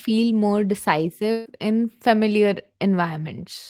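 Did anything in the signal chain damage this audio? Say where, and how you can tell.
Yes. A burst of packet loss on the network leg damaged the speech from 1.31 to 1.47 s, just before "in familiar". For about 140 ms the sound is replaced by a synthetic continuation of the last sound, decaying as the gap lengthens, with no true silence. When the speech resumes, about 140 ms of it is gone. That concealment tail tells it apart from a plain dropout, which would cut to silence.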